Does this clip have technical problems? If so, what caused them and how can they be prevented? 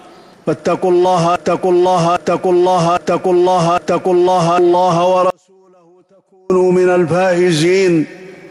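Yes. From 1.36 to 4.58 s there's a broken-record loop: a 0.81 s chunk plays four times back to back, likely a stalled player or stream resending its last buffer. A watchdog that flushes stale buffers on underrun would stop that.

Between 5.30 and 6.50 s there's an audio dropout to a faint residue. The sound cuts abruptly, leaving only a faint leak roughly 35 dB down for about 1.2 s, likely a brief signal-path break with the chain staying live. Secure connections and input-level monitoring would prevent it.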